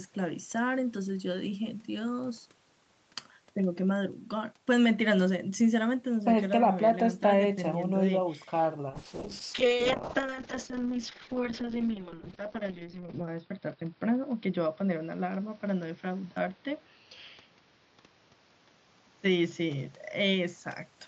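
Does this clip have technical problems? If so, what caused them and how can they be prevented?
Yes. A call bitrate drop from 8.9 s to the end makes the speech rough and muffled. The top end falls from 8 kHz to 6 kHz, consistent with Opus being starved of bits, from about 32 kbps down to 6 kbps. To prevent it, keep the connection uncongested or set a higher minimum encoder bitrate.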